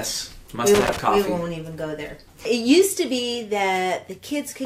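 From 0.75 to 0.99 s there is loose connector crackle: a worn or dirty contact keeps making and breaking, chopping the signal into an irregular burst of scratching crackle. On a waveform this shows as ragged dropouts and sharp spikes; a spectrogram shows scattered broadband vertical streaks.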